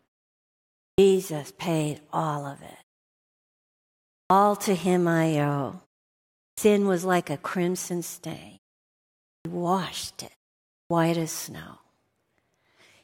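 Clipped start after a pause at 0.88, 4.21 ("to him I"), 6.48 ("was like a crimson"), 9.35 and 10.8 s ("washed it" then "as snow"): the output device wakes late, so about 0.1 s of each onset is swallowed. Speech begins abruptly, and the waveform jumps from flat silence straight to full amplitude with no rising edge.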